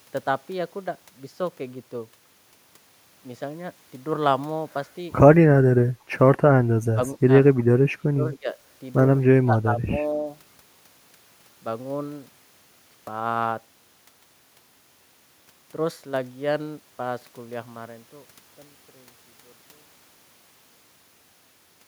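Between 6.45 and 10.26 s the speech keeps sinking away. It dips briefly at 6.45–6.54 s and 6.94–7.0 s. Then it drops for longer, at 7.97–8.57 s and 9.32–10.26 s. The cuts grow from moderate to deep, around 25 dB at their worst. This is speech suppressed in double talk. The likely cause is an echo canceller that mistook this talker for loudspeaker echo while both sides spoke, and turned it down.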